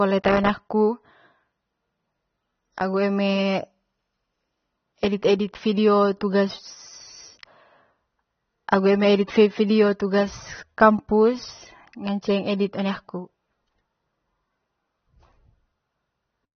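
Speech, carrying plainly audible AAC compression damage from start to finish. Nothing is heard above about 6.3 kHz. The top of the spectrum is simply gone, so the sound is dull and muffled. Sibilants lose their edge and turn smeared and fizzy. Sustained sounds take on a warble. The likely cause is AAC-LC coding at a low bitrate, which fits a 24 kbps stream. That budget forced a low cut-off and coarse quantisation of the remaining bands.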